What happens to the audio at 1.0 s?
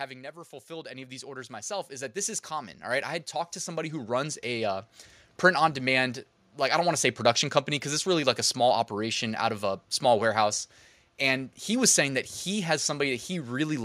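At 1.0 s the audio is inside an automatic gain rising event running from 0.67 s to 4.94 s. The gain control, hearing a quiet input, lifts its level by about 18 dB, so the speech and the background noise swell together until "print on demand like". A waveform shows the envelope and noise floor climbing steadily; a spectrogram brightens across all frequencies at once.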